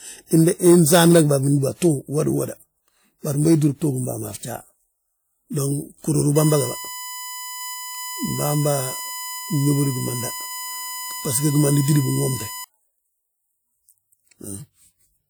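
Speech recording with USB whine from 6.36 to 12.64 s: a steady 1 kHz tone, roughly 15 dB below the speech, as the bus's 1 ms frame current leaks in through power or ground. Unlike mains hum, it sits at 1 kHz, not 50 or 60 Hz.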